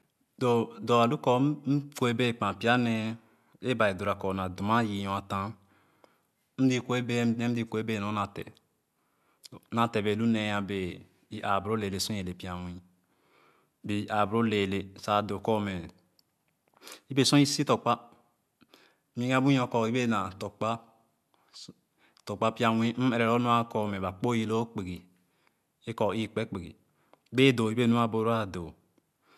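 Nothing stood out as a technical problem on listening to this recording.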